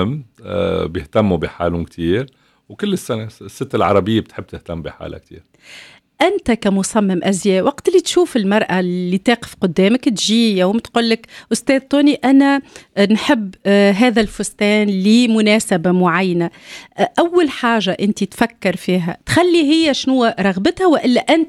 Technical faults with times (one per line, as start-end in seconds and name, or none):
none